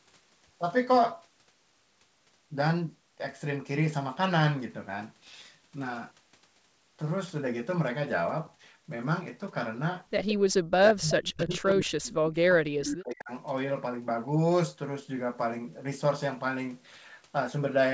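At 10.28 s an echo leak appears: a copy of the speech returns about 175 ms late and roughly 10 dB down, likely because a loudspeaker's echo canceller let residual pickup through. It returns at 11.38 to 11.6 s (about 20 dB down) and at 12.8 s (about 15 dB down). The fixed 175 ms lag separates it from room reverberation, which smears continuously.

From 10.35 to 12.68 s, and again from 12.86 to 13.31 s, speech suppressed in double talk makes the level duck in pieces by as much as about 40 dB, around two seconds and half a second in total. The likely cause is the canceller muting both talkers during overlap. Unlike packet loss, the gaps follow the overlap rather than arriving as random clicks or robotic fill.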